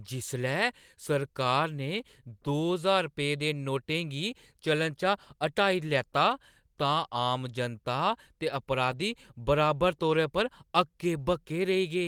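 Right after "जनता ते", around 8.91 to 8.93 s, there's a lost packet rebuilt from error correction: about 20 ms, which fits a single packet going missing. The next packet's low-bitrate backup copy filled in, so there's no gap, just a brief rougher, noisier patch.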